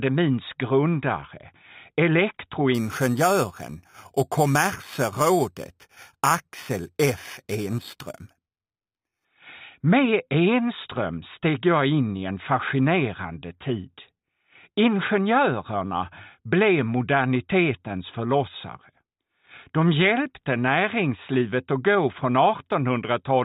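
From about 2.75 s to 9.25 s there's imaging from sample-and-hold upsampling. The rate was raised by just holding each sample, with no smoothing filter, which fits a jump from 8 kHz to 48 kHz. That leaves mirrored copies of the spectrum, the first sitting between 4 kHz and 8 kHz at about 15 dB below the signal. You hear it as a bright, metallic fizz riding on the sound, with its lowest band moving against the pitch.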